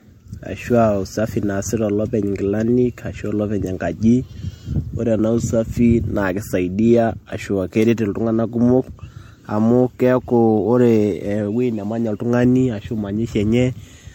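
Throughout the speech, the sound is swirly, smeared and hollow, with softened consonant attacks and nothing above 16.6 kHz. This is likely generation loss: repeated lossy re-encoding, around four passes, each re-quantising on a shifted frame grid, in a way that fits MP3 at 64 kbit/s.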